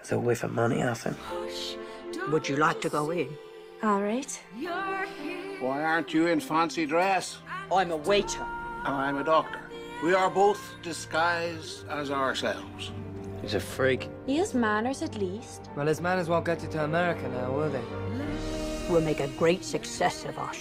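No technical faults can be heard anywhere in the audio, and the signal stays steady and intact throughout.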